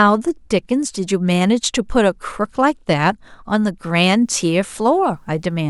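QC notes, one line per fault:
4.13–5.70 s, video or display buzz: a faint 75 Hz buzz with hash above it, well below the speech, as a display or video cable couples its field rate into the audio.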